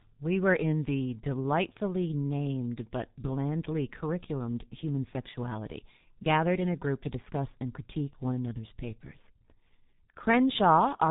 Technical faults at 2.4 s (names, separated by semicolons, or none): G.723.1 codec